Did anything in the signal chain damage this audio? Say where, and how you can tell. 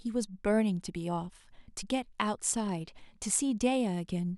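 No, nothing along the way seems to have hurt this speech recording; there's no point in the chain where it gets damaged.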